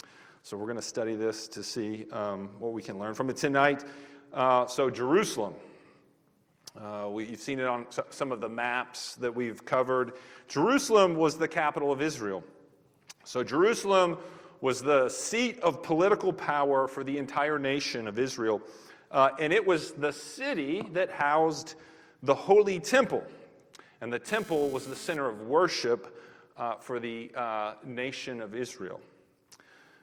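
From 24.28 to 25.17 s, a GSM phone buzz cuts in. It is a hard, raspy tone at about 217 Hz, rich in harmonics. It sits about 21 dB below the main signal and has nothing to do with it. A nearby 2G handset is sending radio bursts 217 times a second. The audio circuitry rectifies those pulses into sound. Here the phone is moving data, so the buzz arrives as a short burst and then stops.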